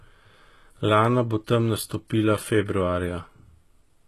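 HE-AAC compression, throughout: nothing above 12.4 kHz, and the treble sounds gritty and lispy, likely rebuilt by spectral band replication at a bitrate near 16 kbps.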